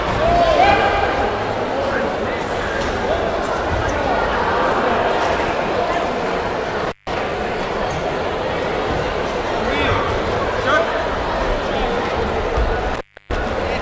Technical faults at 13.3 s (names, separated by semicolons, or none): intermittent contact